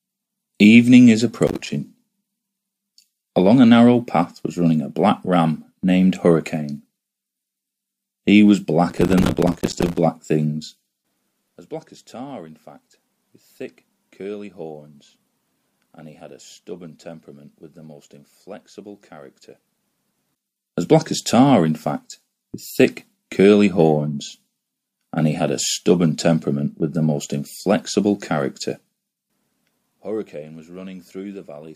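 At 1.47 s, a short burst of processor overload crackle runs until 1.70 s. The processor could not fill each small audio buffer in time, and deadlines slipped one after another. Each miss left a brief silent hole with hard edges, so the sound breaks into rough, gritty crackle. The gaps suggest buffers of around 5 ms. A longer, denser burst follows from 8.90 s to 9.98 s, tearing steadily before it clears.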